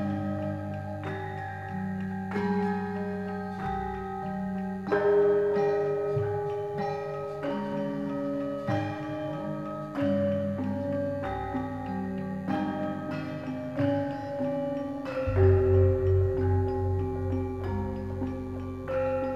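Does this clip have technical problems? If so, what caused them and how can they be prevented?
Yes. DECT cordless phone buzz runs throughout: a nearby DECT phone or base station's radio bursts every 10 ms get rectified, leaving a thin 100 Hz buzz, roughly 35 dB down. Moving DECT phones and bases away from the audio gear prevents it.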